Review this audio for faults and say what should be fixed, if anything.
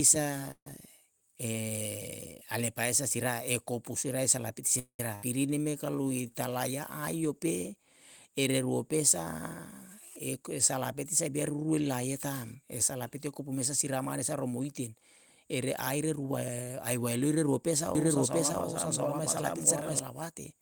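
Call audio freeze at 0.51–0.67 s and 4.79–5.00 s: the last sound is stretched into a fading buzz, then about 70 ms and 90 ms of silence. Playback resumes where it stopped, with nothing lost. This is likely the jitter buffer running empty while packets were held up.

Skip ahead at 5.15–5.24 s: roughly a fifth of a second of speech is dropped. The two sides are joined by a 75 ms bridge, so playback leaps forward almost seamlessly.

Jitter buffer slow-down at 5.51–6.58 s: repeated pitch periods add 132 ms. Speech runs at 89% speed at unchanged pitch, so sounds come out drawn-out.

Jitter buffer speed-up at 10.40–11.74 s, ending just before "laie ta'm", and at 12.55–14.96 s, between "laie ta'm" and "ere aire": short pitch-period cuts remove roughly 70 ms and 150 ms. Speech is hurried to 105% and 106%, with pitch unchanged.

Doubled audio track at 17.95–19.99 s, just after "ae waelire ruo": a dry, full-band second copy about as loud as the original trails roughly 0.7 s behind. 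It starts and stops abruptly, likely from a second, slower capture path.

Stabilise network delivery and tune the jitter buffer so it neither underruns nor overflows, and make sure the audio is captured or mixed through only one path.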